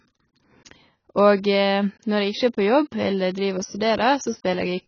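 Throughout, the speech has nothing above 6.8 kHz and a warbling, fizzy smear on sibilants and held vowels. This is likely heavy AAC compression, fitting a bitrate near 16 kbps. A plain low-pass filter would dull the top without that swirling texture.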